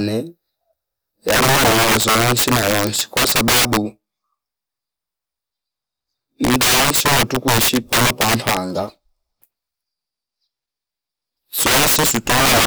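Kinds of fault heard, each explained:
Integer overflow: somewhere in the chain a gain or sum ran past the top of the integer range and wrapped round to the opposite sign instead of being held at the limit, so every peak that goes over flips right across the full scale. In this speech it comes in three stretches, about 1.29–3.77 s, 6.44–8.57 s and 11.59–12.65 s, where the level was pushed roughly 14 to 16 dB too hot, and the loud parts break into harsh cracks far nastier than ordinary clipping.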